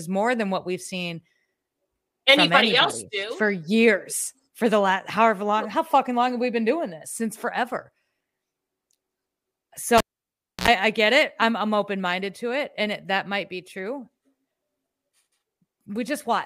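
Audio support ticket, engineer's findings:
Pop at 9.98 s, then near silence for about 650 ms, ending in a short 60 Hz mains buzz of about 66 ms, another pop, audio back by 10.68 s. Cable pulled and plugged in on a live input: connector pulled hot, tip touching first on reinsertion and picking up mains hum before the ground connects. Probable component: input cable or jack. Check the connector.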